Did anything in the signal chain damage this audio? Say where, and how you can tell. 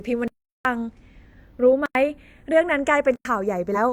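Yes. At the converter stage, the two channels were clocked by separate devices whose rates differ by roughly a few tens of parts per million. The inter-channel delay therefore drifts across the whole clip, reaching only a fraction of a millisecond by the end. You can tell because this is a case of channels drifting apart: folded to mono, the comb-filter notches glide slowly through the speech, giving a slow, continuous flanging colour.

In the driver or buffer stage, the output was likely not filled in time three times. Each time a block of digital silence replaced the audio: 0.28 to 0.65 s (about 372 ms), 1.86 to 1.95 s (about 93 ms), and 3.16 to 3.25 s (about 93 ms). Those lengths fit whole buffers of 16,384 and 4,096 samples. The speech drops hard to silence and returns with no fade.

Near the end, damaged data in a compressed stream hits the codec or storage stage at 3.72 to 3.77 s. 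Corrupted bytes there made the decoder misread frames and lose sync while it hunted for the next valid header. The result is a brief disturbance lasting about 50 ms that doesn't belong to the speech.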